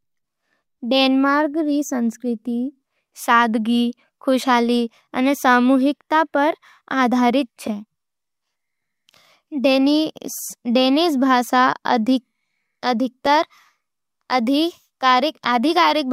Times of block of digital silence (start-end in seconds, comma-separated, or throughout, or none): 13.26